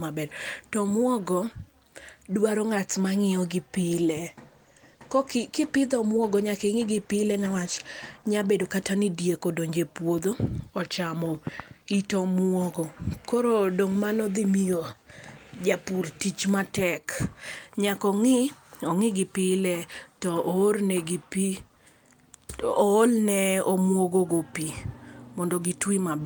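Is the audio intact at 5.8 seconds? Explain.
No. At 5.8 seconds the speech sits inside a call bitrate drop running from 3.81 to 8.33 s. The call's bandwidth estimate fell and the encoder was pushed from 40 kbps down to 17 kbps, holding that low rate for about 4.5 s. With so few bits, Opus codes each frame more coarsely and trims the high frequencies, so the voice turns muffled and rough until full quality returns just before "bedo kata ni diek".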